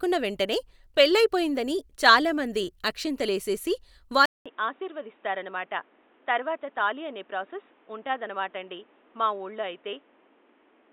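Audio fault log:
4.26 s to the end: input switched to a poorer device. Right after "పెళ్ళయిపోయిందని చాలా మంది అక్షింతలేసెసి" there's a 200 ms dropout, then the speech comes back dull and boxy with nothing above 3.8 kHz, a few dB quieter, and with new background noise sitting around 30 dB under it. The likely cause is the recording jumping to a narrower-band mic or a headset call profile, which brings its own tone, level and noise.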